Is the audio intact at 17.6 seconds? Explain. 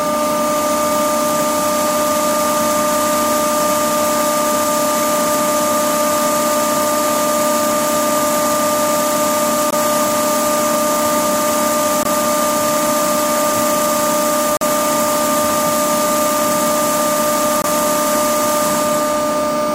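No. From 17.62 to 17.65 s the sound cuts to silence for about 34 ms, then resumes further along, as if it had kept playing. This is likely a Bluetooth dropout. A packet missed its deadline and was discarded, which fits one lost frame of about 21 ms.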